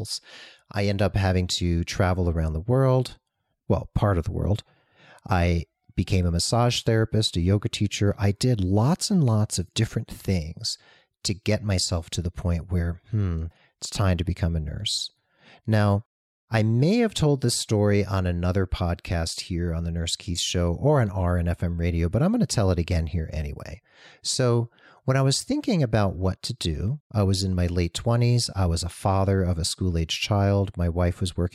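No technical faults can be heard anywhere in the speech recording.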